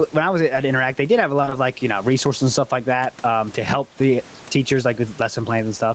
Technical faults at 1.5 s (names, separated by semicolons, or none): gain pumping; short concealed packet loss